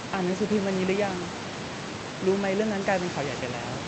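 A speech recording with nothing technically wrong in it.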